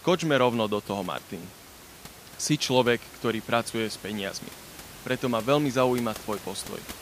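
No faults are audible in this speech recording; the only background is room noise sitting about 19 dB below the speech, which is part of the recorded environment rather than anything the system introduced.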